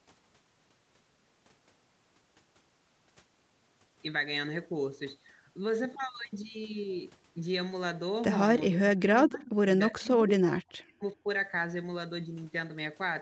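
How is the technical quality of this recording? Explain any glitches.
Two stretches of speech drop out sharply: from 8.68 to 9.64 s, and again from 9.99 to 11.28 s. The audio is band-limited at 8 kHz by the call path.

In both stretches the speech sinks by around 30 dB and then around 40 dB, breaking into fragments or vanishing. The likely cause is speech suppressed in double talk: with both sides talking at once, the echo canceller mistook this talker for loudspeaker echo and turned the audio down.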